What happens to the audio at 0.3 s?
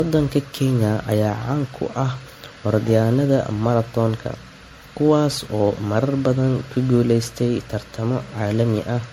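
At 0.3 s the speech carries generation loss that runs through the whole clip. It sounds swirly, hollow and smeared, with softened consonant attacks, most likely from repeated MP3 encoding at about 64 kbit/s, perhaps seven passes. Each pass requantises on a shifted frame grid, so the damage compounds. A spectrogram shows a hard ceiling at 16.5 kHz, patchy holes and speckle in the upper bands, and onsets smeared across time.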